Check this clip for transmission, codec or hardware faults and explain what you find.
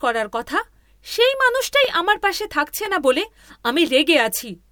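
The speech has one recurring fault, overlapping chunks, at 0.83, 1.85, 2.86 and 3.87 s. The first comes right after "করার কথা", the second just before "আমার পাশে থাকছে না", and the third just before "না বলে". Each 1.0 s chunk begins 12 ms before the previous one finished, so those 12 ms play twice. That gives an evenly spaced tick or stutter. On the waveform, each join shows a small step or discontinuity. On the spectrogram, it appears as a thin vertical broadband line once per second.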